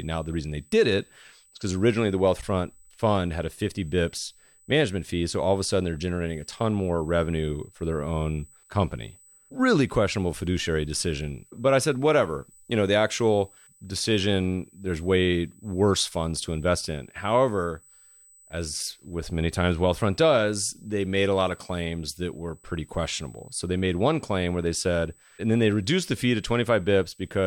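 A thin, steady high-pitched whine at 8 kHz sits under the speech for the whole clip, faint at roughly 35 dB below it. This is USB whine: current drawn by the bus in 125 microsecond microframes leaks into the audio through power or ground.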